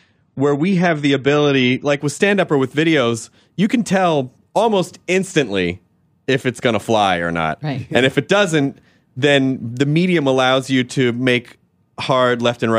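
From 0 to 2.0 s the speech carries the sound of an adaptive stream starting at a low bitrate: nothing above 9 kHz and heavier codec artefacts, which fits roughly 32 kbit/s AAC. At 2.0 s the quality steps up abruptly without a gap, consistent with a switch to about 96 kbit/s.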